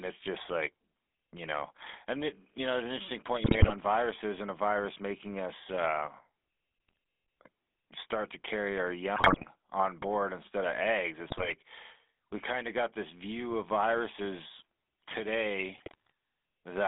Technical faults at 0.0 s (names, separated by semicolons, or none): GSM full-rate codec